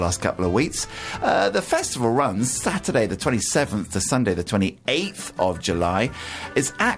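No technical faults can be heard anywhere in the recording. Nothing breaks, drops out or changes character at any point along its run.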